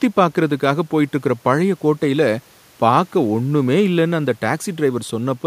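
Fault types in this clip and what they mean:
No faults can be heard anywhere in this recording.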